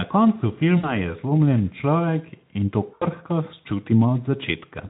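At 0.77 to 0.92 s and again at 2.93 to 3.06 s, VoIP packet loss is concealed by the speech codec. About 60 ms, then 80 ms, of speech went missing. The Speex decoder fills each gap by extending its last pitch, producing a fading buzzy or noisy smear.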